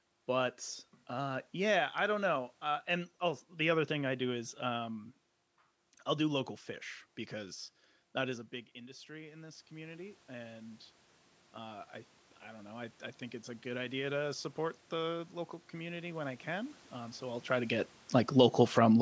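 From 7.3 s to 17.5 s, automatic gain rising lifts speech and room noise together by about 13 dB, seen as a widening waveform envelope.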